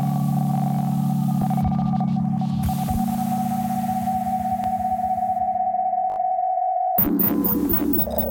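A repeated buffer occurs twice in this music. From 4.64 to 4.66 s, a 20 ms slice plays once more, heard as a brief click-like hiccup with a hard join. From 6.10 to 6.18 s, the same fault lasts longer: one piece sounds four extra times, giving a short buzzy stutter. In both cases fresh audio failed to reach the output in time, so the device replayed its last block, which fits a 20 ms buffer, and no music seems skipped afterward.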